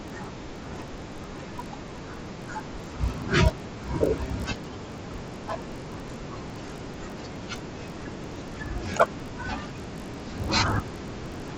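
From start to finish, the speech carries a buzz at 50 Hz, the signature of a resampler restarted on every block. Each 20 ms block was converted on its own, apparently from 16 kHz to 48 kHz, so every block edge was computed without its true neighbouring samples and leaves a small tick. Unlike mains hum at the same rate, this buzz vanishes in the pauses and rides only on the speech itself.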